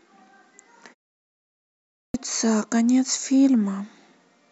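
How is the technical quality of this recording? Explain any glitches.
One glitch affects this speech recording: a clipped start after a pause. At 1.61 s, after a 0.75 s pause, the first 0.53 s vanishes. The output device dozed during silence and woke late, so speech resumes abruptly, missing its opening sounds.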